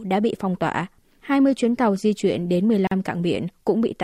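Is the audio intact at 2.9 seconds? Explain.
No, not quite. At 2.87 s the speech drops into a gap at a join of encoded pieces, a silence of about 42 ms running to 2.91 s. The audio was encoded in separate chunks and stuck back together without trimming, so the encoder's start-up delay and the padding on the last frame both stayed in. You hear a short hole, its edges smeared by the codec, and then the speech picks up right where it left off.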